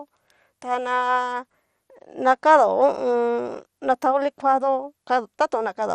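From start to finish the speech has that dull, gurgling, granular quality you get from low-rate digital radio, and nothing comes through above about 15.1 kHz. It's most likely MP2 compression. MPEG Layer II splits the signal into 32 sub-bands and gives each a share of bits. When there aren't enough bits, upper bands drop out and flicker, and the rest are coarsely quantised. The damage is plainly audible here, which fits a rate around 64 kbps.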